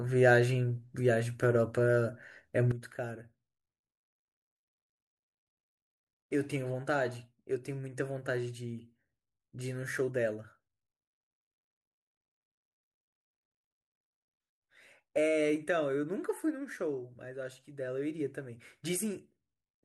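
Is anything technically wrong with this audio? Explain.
Yes. There is a sudden gain jump at 2.72 s. From that instant to the end, the speech drops by about 11 dB. The background noise drops with it by the same amount. The level change is abrupt, from one sample to the next, with no fade. The likely cause is a digital gain setting or bit shift applied without a ramp. It sounds as if someone suddenly turned the volume down and left it there.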